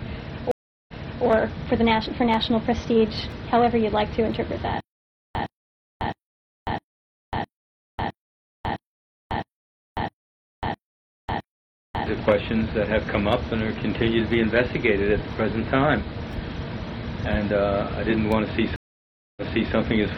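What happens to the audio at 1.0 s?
At 1.0 s the audio is inside a stream reconnect spanning 0.51 to 1.25 s. The connection drops, leaving about 367 ms of silence. Then a fresh decoder starts mid-stream and playback resumes 372 ms earlier, so a short stretch of sound repeats.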